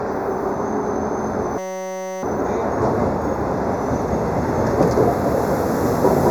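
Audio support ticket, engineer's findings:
Channel delay (comb filtering), throughout: hollow, phasey tone. One channel lags roughly 0.15 ms before the mono sum, so common content cancels at evenly spaced notches, the first near 3 kHz.

System hang loop, 1.58–2.23 s: steady 188 Hz buzz. A driver or host stall left the hardware cycling one 5.33 ms chunk, which fits a 256-sample ring buffer, repeated many times.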